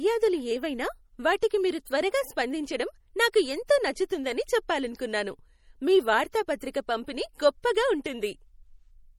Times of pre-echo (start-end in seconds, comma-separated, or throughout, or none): 1.41, 1.85